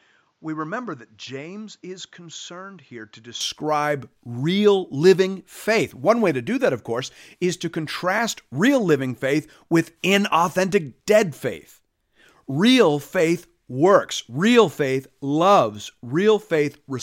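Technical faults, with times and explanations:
0.00–3.41 s, input switched to a poorer device: the speech opens dull and boxy, with nothing above 7.6 kHz, about 10 dB quieter, and with a faint new noise floor well below the signal. At 3.41 s it clears with no gap. The likely cause is a change of input device mid-recording. On a spectrogram the opening shows a flat ceiling at 7.6 kHz that lifts abruptly, and the waveform steps up in amplitude at the switch.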